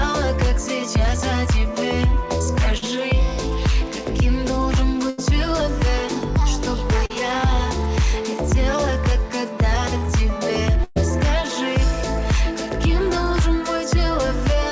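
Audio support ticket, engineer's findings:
Short concealed packet loss at 2.78, 7.06 and 9.98 s. About 40 ms each, bridged by the jitter buffer's concealment extending the last sound. Heard as a brief smear or wobble, too short to fade.

Burst of packet loss at 5.10 s (about 80 ms) and 10.84 s (about 120 ms). Concealment holds the last sound and turns it down, reaching silence for the final 20 ms at 10.84 s. Unlike the short losses, a held, decaying buzz or hiss, and the audio resumes further on.

Call path band-limited, nothing above 8 kHz, consistent with G.722 at 64 kbps.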